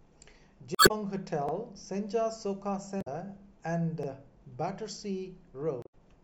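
Damaged data in the compressed stream throws the decoder out of sync at 0.75–0.91 s, 2.98–3.08 s and 5.82–5.94 s. Each time it misreads frames and hunts for the next valid header, so the speech breaks into a brief chirp or squawk. Overlapping chunks, from processing in 2.5-second blocks that each begin before the previous one ends, replay about 48 ms of speech at the joins at 1.49 s and 4.03 s, heard as a quick click-like stutter.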